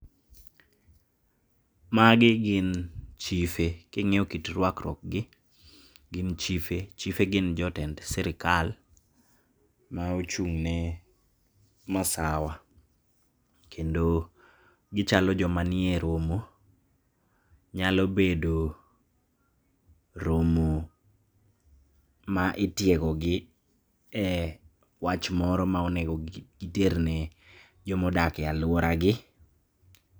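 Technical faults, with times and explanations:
No technical faults detected in the speech audio.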